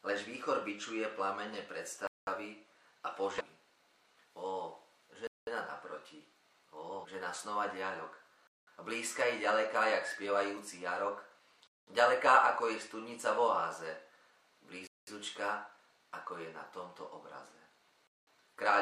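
Starting at 2.07 s, the audio arrives in 3-second chunks with silence inserted at each join. This gap between chunks leaves 200 ms holes at 2.07, 5.27, 8.47, 11.67, 14.87 and 18.07 s, recurring every 3.2 s without any sound being lost. In between, damaged data in the compressed stream throws the decoder out of sync while it hunts for the next frame header, producing short disruptions at 3.36 to 3.42 s and 7.00 to 7.06 s.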